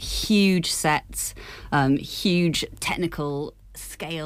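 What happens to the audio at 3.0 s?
At 3.0 s you're right in the middle of a stretch of zipper noise running from about 2.54 to 3.71 s. The level is being pulled down by roughly 10 dB, but instead of gliding it jumps in tiny stairsteps, around a hundred a second, which points to a gain update once per buffer with no smoothing. Each jump leaves a little click, so you hear a fine ticking, zipping texture riding on the sound while it fades.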